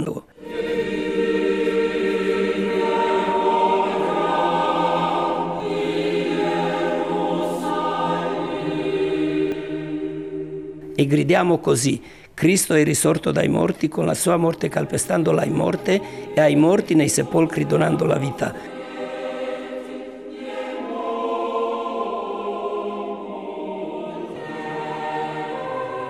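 Dropped buffers at 5.6, 9.52 and 24.36 s: each is an abrupt jump with the sound skipping ahead, roughly 40, 70 and 40 ms, likely from capture overruns.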